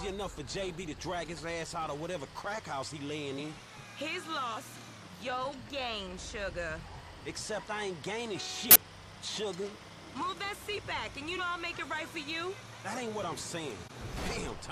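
The audio has compressed frames skipped at six points: 0.79, 3.37, 4.55, 8.69, 11.36 and 13.84 s. At each, the sound leaps forward by a few tens of milliseconds, whole frames missing or rejected by the decoder. Nothing goes silent at the joins, unlike a dropout gap.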